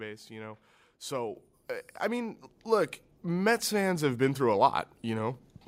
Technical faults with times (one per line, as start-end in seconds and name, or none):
1.35 microphone volume stepped up
2.37 microphone volume stepped up